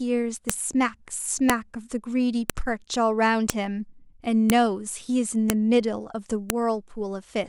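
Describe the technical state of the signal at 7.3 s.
At 7.3 s the speech signal is intact, with no audible technical fault at that moment.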